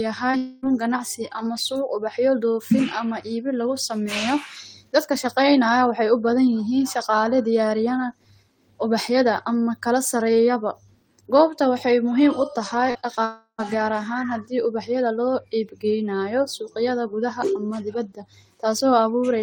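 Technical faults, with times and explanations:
0.31–0.35 s short concealed packet loss: About 20 ms of the stream failed to reach the decoder in time. The receiver extended the preceding sound to cover the gap and then blended back into the real signal, so a brief smear is heard right at the start.
0.37–0.65 s long network dropout: Roughly a quarter of a second of audio then went missing, likely from the network connection stalling. The receiver kept the last sound going as a fading buzz or hiss across almost the whole gap. No silence is reached before the speech resumes, and the lost portion is simply skipped.
12.91–13.19 s short concealed packet loss, three events: Right after "goobta waxay muhiim utahay", gaps of about 40 ms at 12.91 s, 20 ms at 13.01 s and 20 ms at 13.15 s were filled with continued sound. The cluster is heard as a wobbly, smeared patch in which short consonants may blur.
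13.25–13.60 s long network dropout: Still just after "goobta waxay muhiim utahay", about a third of a second failed to arrive, likely because the link broke off briefly. The filled-in sound decays as a buzz or hiss and then drops into silence for roughly 90 ms. The speech returns with that stretch missing.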